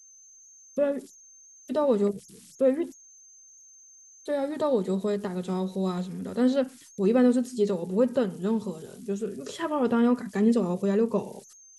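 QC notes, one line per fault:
throughout: converter idle tones, a whistle near 7 kHz in pauses and grain under quiet speech, about 28 dB down; an undithered delta-sigma converter cycling bit patterns.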